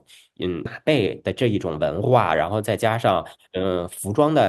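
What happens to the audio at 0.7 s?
At 0.65 to 0.67 s the speech has a skip ahead: roughly 0.7 s of audio was discarded, likely by an overflowing jitter buffer, and playback jumps straight to later material with no gap, so the two sides join almost directly and the delay shrinks abruptly.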